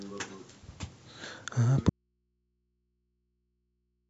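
A short speech recording with an audio dropout to a faint residue: at 1.89 s the voice cuts out abruptly and never returns, leaving only mains hum around 50 dB down until the end. The break is likely a lost signal feeding a still-live, open input.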